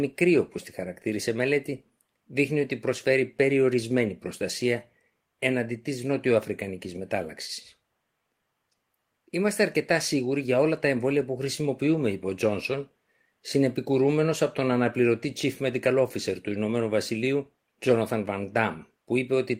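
No technical faults are audible.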